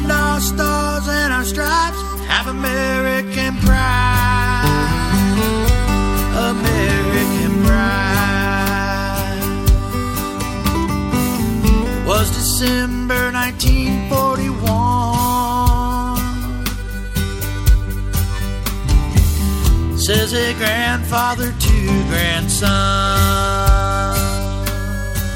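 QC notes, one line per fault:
1.61–2.52 s, 14.25–15.21 s and 20.83–24.68 s: Bluetooth SBC bit pool drop. In each span the treble dulls abruptly and a gritty, grainy noise rises, then clears. This fits the link's bit pool falling from 28 to 13 (about 102 kbps), starving the top sub-bands and coarsely quantising the rest. On a spectrogram, energy in the top bands drops out in blocks with speckled noise below. The waveform shows little change.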